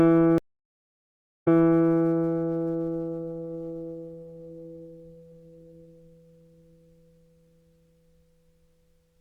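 At 0.38 s a stream reconnect leaves 1.08 s of silence. At 1.80 s the sound restarts 0.34 s earlier, repeating a stretch that a plain dropout wouldn't.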